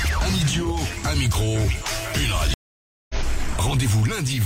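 At 2.54 s a stream reconnect occurs. The connection drops, leaving about 0.56 s of silence. Audio returns at 3.15 s, skipping ahead about a third of a second.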